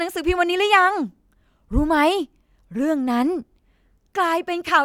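Nothing here needs flagging; it's just the speech, with no technical faults to point to at any moment.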